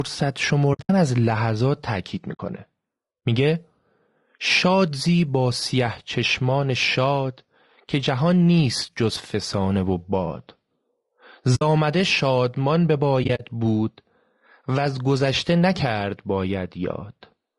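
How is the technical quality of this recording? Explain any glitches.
The recording has plainly audible codec damage throughout, plus four short dropouts.

Low-delay AAC compression, throughout: the speech sounds rough and grainy, with noise between harmonics. This is likely AAC-ELD at a low bitrate, consistent with about 32 kbps, whose short frames resolve pitch poorly.

AAC frame loss with muting, at 0.73–0.90 s, 2.33–2.41 s, 11.55–11.62 s and 13.23–13.41 s: the decoder zeroed the lost frames, so overlapping windows fade the sound into soft gaps totalling 60 to 140 ms. The first and last gaps are broken into pieces.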